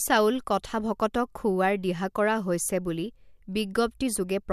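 No technical faults can be heard anywhere in the speech. Nothing in the signal stands out as a problem at any point.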